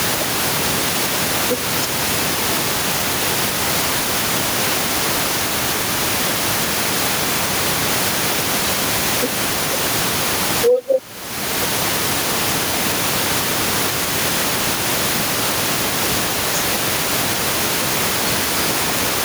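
Throughout the speech, the level breathes, with a swing of around 5 dB. The room noise sits about 30 dB below the speech. This gain pumping is likely a fast limiter acting on an input set too hot.

From 3.0 to 4.0 s, from 9.5 to 10.5 s, and again from 16.5 to 17.5 s, two 500 ms chunks play in swapped order, the earlier one arriving one chunk late. These chunks out of order sound like a brief jumbled stretch.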